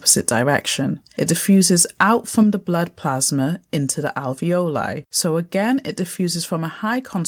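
At 0.08 to 0.29 s and again at 1.79 to 2.03 s the input gain was likely set too high, driving the peaks about 5 dB and then about 4 dB past the converter's ceiling. This microphone overload flattens the tops of the waveform, clipping roughly one percent of samples in the first burst and a little less in the second, so the loudest syllables take on a harsh, crackly, buzzing edge.

At 2.43 s, just before "the blood", the call software likely reacted to those clipped peaks by turning the device's input volume down in a single step of about 4 dB. The level of the speech and the background drops abruptly at that point instead of fading. A second, smaller microphone volume step-down of about 2 dB follows at 6.57 s, lowering the level once more in the same sudden way.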